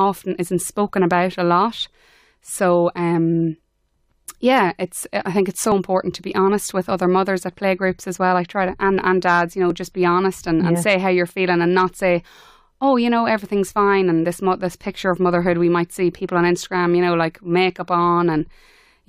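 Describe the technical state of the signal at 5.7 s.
At 5.72 s the speech has an overlap between stream segments. Two segments claim the same stretch of time, so the player discards a sliver of real audio. The waveform jumps across the gap, heard as a brief click or tiny skip.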